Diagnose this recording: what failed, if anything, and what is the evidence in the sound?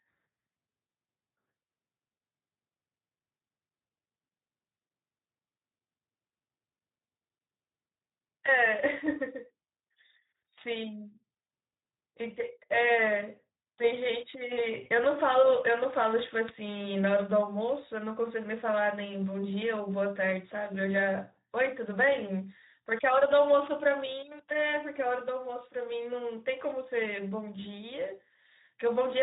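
Hoarse, noisy speech with plainly audible coding damage throughout points to the Speex codec at a low setting, which fits roughly 11 kbps. Too few bits for the excitation leave it rough.

From 14.83 to 14.89 s the speech is briefly stretched and fades. This is VoIP packet loss concealed by the speech codec, consistent with one 20 ms frame lost in the network and extrapolated by the decoder.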